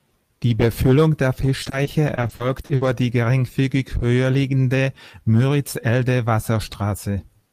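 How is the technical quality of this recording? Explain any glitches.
The recording has one clear glitch: repeated packet loss (robotic sound) between 1.63 and 2.87 s. Over that stretch the speech breaks up into about ten short holes, the longest about 60 ms, which together take up about 280 ms, nearly a quarter of the span. Each hole is papered over by stretching the preceding sound, so roughly a third of a second is synthetic fill. That gives the choppy, robotic texture. Unlike a single dropout, the gaps recur in quick succession rather than leaving one isolated silence or click.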